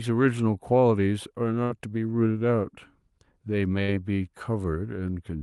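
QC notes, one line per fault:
1.63–1.72 s and 3.82–3.90 s, burst of packet loss: about 60 to 65 ms each is covered by concealment that stretches the last sound into a fading buzz or hiss rather than silence, and then the speech resumes with roughly 60 ms skipped.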